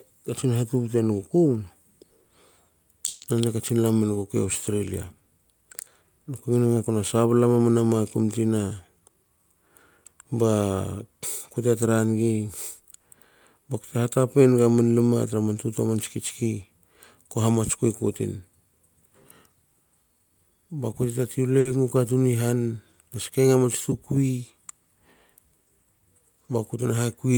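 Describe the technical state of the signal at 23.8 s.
The receiver's jitter buffer had filled past its target, so from 23.63 to 24.53 s it repeatedly cut out short pitch-period slices, dropping roughly 70 ms in total. This jitter buffer speed-up plays the speech at 107% speed with unchanged pitch, so it sounds briefly hurried.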